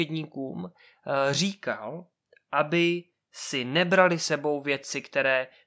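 No technical faults can be heard anywhere in this speech recording, and the signal stays intact throughout.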